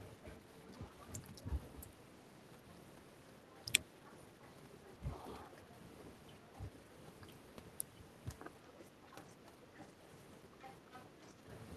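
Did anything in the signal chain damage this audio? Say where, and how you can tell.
Yes. The talker's speech dips by roughly 5 to 10 dB in brief patches at 0.9–1.45 s, 4.98–5.68 s, 6.51–6.72 s and 8.95–11.51 s. This is speech suppressed in double talk, likely from the call-processing echo canceller turning down the near voice while the far end also spoke.

A second voice leaks in at 3.57–4.88 s and 8.79–9.86 s about 10 dB under the talker, and louder, about 5 dB under, at 10.61–11.31 s. This is the other side's voice leaking through, likely loudspeaker echo the canceller failed to remove.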